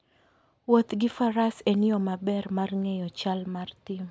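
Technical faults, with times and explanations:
The speech signal shows no audible technical faults at any point.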